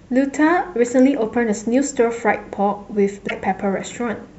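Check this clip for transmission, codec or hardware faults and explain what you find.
One fault turns up, late in the speech. From 3.25 to 3.31 s a short glitch cuts across the audio. This is damaged data in a compressed stream. Some bytes in the encoded file were lost or corrupted there, so the decoder misread those frames, lost sync and skipped ahead to the next valid frame header. The result is a brief glitch.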